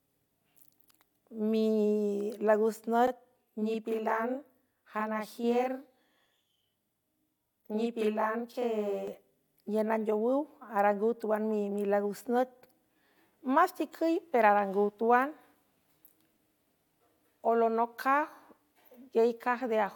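Channel delay (doubling), 3.07 to 9.07 s: one channel lags 42.67 ms, which fits a 2048-sample buffer, so the mono sum doubles the speech as a same-level slap echo.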